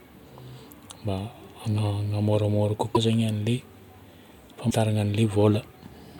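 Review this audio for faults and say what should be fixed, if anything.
Two brief glitches in the speech at 2.94–2.97 s and 4.69–4.72 s, each a short jump in the audio lasting about one 24 ms frame. That's likely a broken MP3 bit reservoir, where dropped frames leave the next ones borrowing the wrong bytes. Keep MP3 streams intact by cutting or joining only at frame boundaries with reservoir-aware tools, or by working from the uncompressed source.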